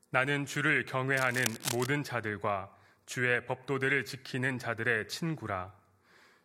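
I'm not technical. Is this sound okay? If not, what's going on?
No, there's cable scratch noise from 1.14 to 1.86 s, a fairly loud scratchy rustling over the speech, likely from a worn cable or connector being moved.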